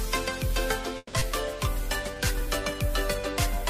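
From 0.97 to 1.24 s a long network dropout likely starved the receiver, so the last sound is stretched into a fading buzz or hiss, followed by a brief silence. About 120 ms of audio is missing when it resumes.

Between 1.80 and 2.47 s a jitter buffer slow-down repeats small fragments to rebuild its reserve, adding about 43 ms. The sound plays at 94% speed with unchanged pitch and drawn-out passages.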